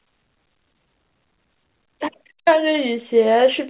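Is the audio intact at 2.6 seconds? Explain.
Yes, the audio is intact at 2.6 seconds, with the speech carried cleanly through the call path and no dropout, glitch or distortion at that moment.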